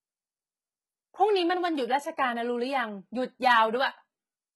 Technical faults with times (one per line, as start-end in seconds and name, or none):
0.00-4.55 HE-AAC compression